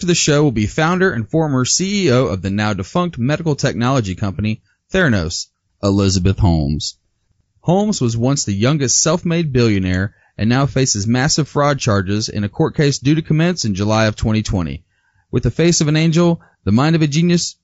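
Throughout the speech, a low-delay AAC compression stage was likely at work, consistent with AAC-ELD near 32 kbps, leaving the voice audibly rough and grainy, with noise between harmonics.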